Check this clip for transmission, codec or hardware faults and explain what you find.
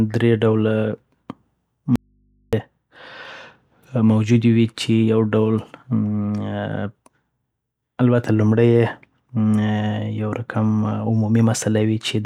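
One fault is present: an audio dropout to a faint residue. From 1.96 to 2.53 s, the speech cuts out abruptly for 0.57 s. Only mains hum remains, roughly 40 dB down. The likely cause is a live input after a brief signal loss.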